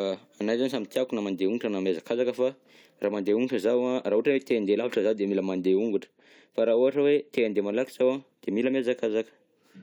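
No technical faults can be heard anywhere in the speech, so there is nothing to describe in time order.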